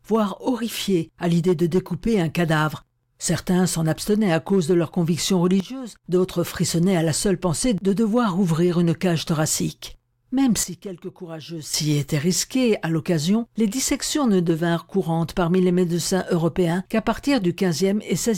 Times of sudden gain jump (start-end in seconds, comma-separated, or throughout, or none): 5.60-6.04, 10.63-11.74